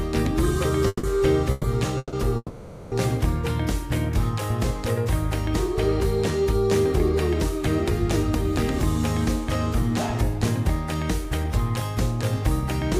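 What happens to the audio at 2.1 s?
A call audio freeze runs from 1.98 to 2.15 s: the last sound is held as a fading buzz or hiss for 150 ms, then about 20 ms of silence, likely from delayed packets draining the jitter buffer. The audio then resumes where it stopped, with nothing lost but running 150 ms later.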